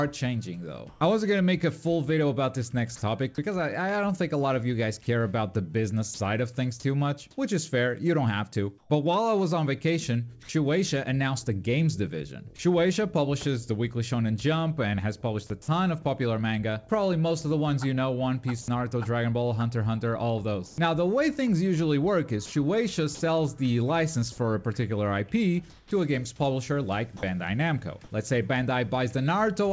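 From 0.89 to 1.01 s the background turns into a steady, featureless hiss for about 120 ms, roughly 2 dB quieter than the real background, which sits about 28 dB below the loud parts. This is comfort noise in place of the background, likely because the sender's detector paused transmission and the receiver synthesized a smooth noise bed. The same substitution returns between 25.70 and 27.23 s, covering about 270 ms.

At 6.14 to 6.20 s, 60 ms of sound vanishes into that flat noise. This is sound dropped by the voice detector, likely because the detector misjudged a quiet stretch as background. A shorter drop at 27.17 to 27.23 s loses about 40 ms.

From 8.78 to 10.49 s, and again from 18.62 to 23.21 s, the sound turns choppy, with two or more holes. About 180 ms and 300 ms are replaced. This is sound chopped by the voice detector, likely from the sender toggling transmission on and off repeatedly.

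Nothing above 8 kHz is heard, which fits a wideband call codec such as G.722.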